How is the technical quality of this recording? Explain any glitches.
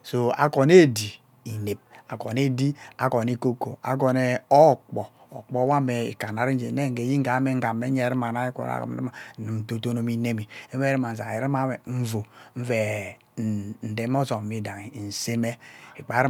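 The technical quality of this recording is good, with no glitches to explain.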